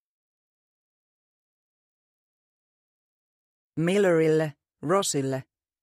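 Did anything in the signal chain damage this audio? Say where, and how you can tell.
Yes. Dropped samples, single sharp clicks at 4.28 s and 5.16 s; a handful of samples likely went missing in the driver or buffer stage, so the waveform jumps.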